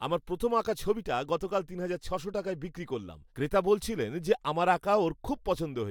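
A short recording of speech, with no technical faults to report. Nothing heard in it calls for a time or a cause.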